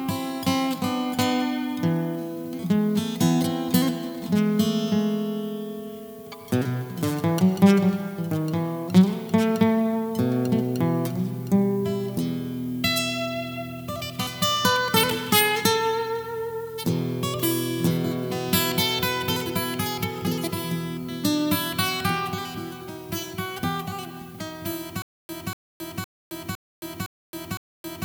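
From 25.02 s to the end, a stutter with silent gaps: a 240 ms burst repeats six times at an even 510 ms pace, separated by 270 ms of dead digital silence. The likely cause is a stalled stream replaying its last fragment at each retry, losing the audio meant for those gaps.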